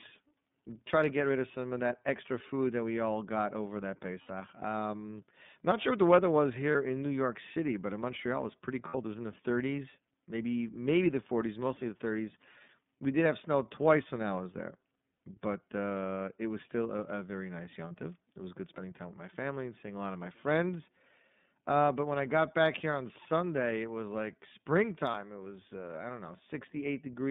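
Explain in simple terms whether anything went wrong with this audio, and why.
The speech passed through the iLBC codec, a narrowband phone codec that keeps only about 150 Hz to 3.6 kHz, so it sounds plainly rough and synthetic.

There are lost iLBC frames at 4.23, 6.71, 8.88, 15.14, 17.88 and 25.11 s. Each gap, 30 or 60 ms, is filled with a repeated, buzzy vowel-like sound, and the speech then recovers right away.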